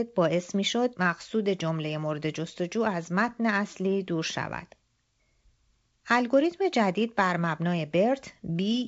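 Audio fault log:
No fault to log.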